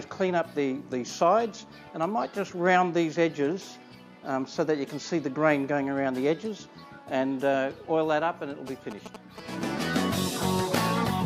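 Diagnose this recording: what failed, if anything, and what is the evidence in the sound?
GSM signalling bursts entered at the analogue wiring stage: from 8.67 to 9.63 s a galloping run of short 217 Hz buzzes sits roughly 10 dB below the sound. A nearby 2G phone's radio bursts were rectified in the circuit. The intermittent, clustered pattern distinguishes it from steady mains hum.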